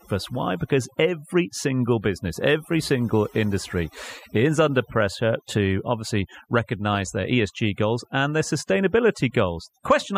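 From the first moment to the last, the speech carries overdone noise removal. A noise suppressor set far too aggressively is cutting individual frequency bands whenever their level sits close to its noise estimate, so soft parts of the speech are stripped out along with the noise. Between phrases the background drops to near silence dotted with twinkling specks. On a spectrogram the gaps look blank, scattered with isolated bright pixels, and the speech harmonics appear ragged and patchy.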